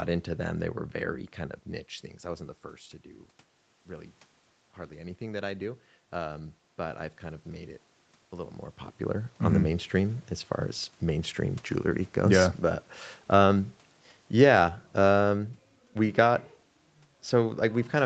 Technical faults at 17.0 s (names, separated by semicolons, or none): automatic gain falling